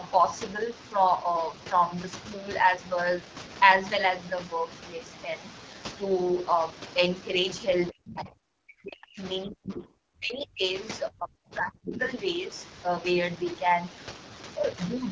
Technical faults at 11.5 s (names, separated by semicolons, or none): AMR wideband (HD Voice) codec; speech suppressed in double talk